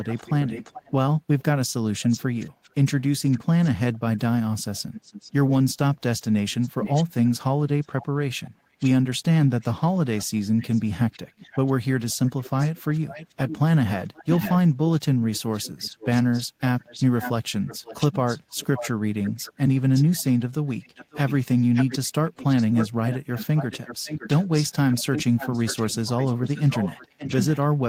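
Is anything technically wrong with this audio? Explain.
Yes. Echo leak occurs from 0.0 to 1.43 s, 2.02 to 2.7 s, 4.93 to 5.32 s and 9.46 to 11.73 s. A faint copy of the speech trails it by 431 to 485 ms, weakening to very faint, likely far-end loudspeaker sound escaping an echo canceller. Spectrograms show fainter, time-shifted repeats of the speech harmonics.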